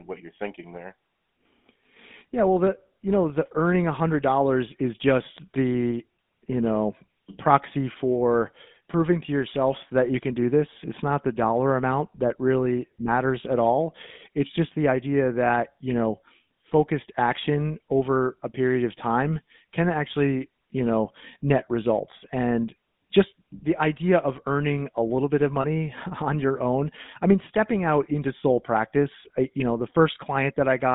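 Throughout, the speech carries the buzzy, gravelly roughness of the GSM full-rate codec. This coder models the vocal tract and drives it with sparse, regular pulses, which fits a 13 kbps stream. The band runs only from 150 Hz to 3.6 kHz.

At 25.62 to 25.65 s, lost GSM frames cause a brief metallic ring. The decoder filled the gap by repeating the last good frame's settings. The dropout fits a single missing 20 ms frame.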